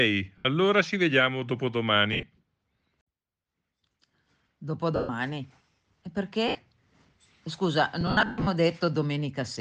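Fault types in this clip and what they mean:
lost LE Audio frames: at 0.38, 2.13, 4.96, 6.48 and 8.01 s, gaps of 70 to 300 ms where the decoder fills missing frames by replaying the last spectrum with scrambled signs, so speech smears into noise and the longer 8.01 s loss fades toward silence.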